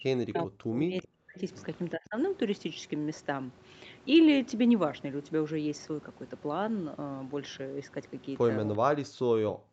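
A speech clip whose level collapses three times, from the start to 1.44 s, from 1.93 to 2.16 s, and from 8.91 s to the end, by up to about 40 dB (about 25 dB in the short middle dip). The waveform pinches to near flatline and the spectrogram empties out in those stretches below its 8 kHz ceiling, likely speech suppressed in double talk, with the echo canceller ducking this talker while the far side spoke.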